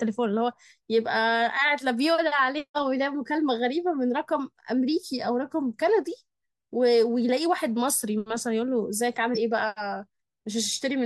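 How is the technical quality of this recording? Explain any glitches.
The recording has two dropouts where compressed frames were skipped. At 2.15 to 2.19 s and 9.34 to 9.37 s, the decoder lost or rejected whole frames, so the speech jumps ahead by about 70 ms and 40 ms.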